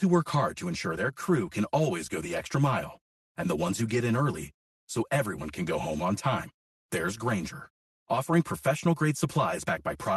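From start to finish the speech sounds hollow and phasey, with a thin, boxy colour that never changes. This is channel delay (comb filtering). One channel arrives roughly 5 ms behind the other, and when the two are summed to mono, the parts they share cancel at regularly spaced frequencies. The first notch sits somewhere around 100 Hz, and further notches repeat evenly up the spectrum. That fixed pattern of holes is what gives the speech its hollow colour.

Across the whole clip the timing feels slightly unsteady. There are faint stumbles and a delivery that seems a little hurried, at irregular moments. The cause is clock drift between sender and receiver. The sender's clock appears to run around 4 percent fast, so audio reaches the receiver's jitter buffer quicker than it is played out. The buffer keeps creeping towards full and has to be trimmed, which produces those recurring, unevenly spaced hiccups.

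The trimming shows up as repeated timing corrections from 0.04 s to 9.97 s. Throughout that stretch the receiver drops short pieces of audio so that the result plays at about 104 percent of the sender's pace. Every correction goes the same way, removing audio and never repeating it. Each cut is small, so you hear it as a brief skip or a slight jolt in the rhythm. The gaps between cuts vary, so the unsteadiness never settles into a regular beat.

The audio also came through a call path using the Opus codec, heard as coding texture and a top end that stops near 12 kHz.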